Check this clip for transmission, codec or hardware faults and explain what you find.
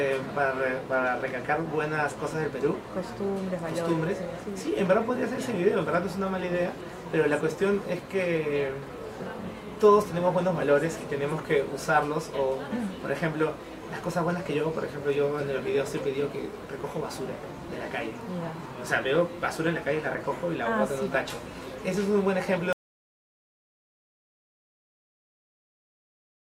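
There is one fault: an audio dropout to silence from 22.73 s to the end. The audio cuts off abruptly and is replaced by digital silence with no room tone, which points to the input being lost, likely through a disconnected device or failed link, while recording continued.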